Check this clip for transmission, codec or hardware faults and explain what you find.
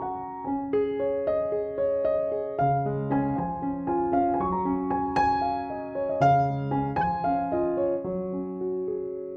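One fault is present: a corrupt frame decoded from 7.01 to 7.03 s. Flipped bits in a single compressed frame reached the decoder, which misread its gains and codes and played it anyway, putting stray energy at the wrong frequencies. The result is a brief glitch, peaking around -25 dBFS.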